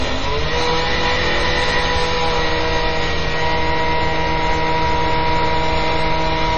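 Everyday sounds here, and the whole clip is hit hard by what's likely MP3 compression. Nothing comes through above 8.2 kHz, so the top end is just gone and everything feels dull and boxed-in. Underneath that it's watery and swirly, with quieter detail flickering in and out as the encoder drops weak frequency lines from frame to frame, and sharp onsets come out smeared. Damage this heavy points to a very low bitrate, something like 32 kbps.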